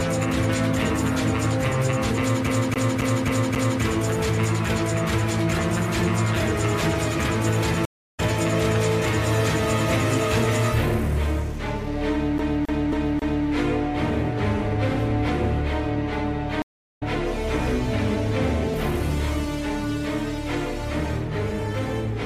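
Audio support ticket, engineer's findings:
Fast, even stutter at 2.47–3.82 s (5 repeats) and 12.38–13.46 s (4 repeats): same 270 ms slice replays with a brief mute at each jump. CD stuck on one turn: a scratch knocks the laser back one track every rotation.

Dropout to silence at 7.85–8.2 s (330 ms) and 16.62–17.03 s (392 ms). Audio resumes skipped ahead, by about 0.2 s and about 0.3 s respectively. Stream reconnect: the connection dropped and the player restarted decoding mid-stream.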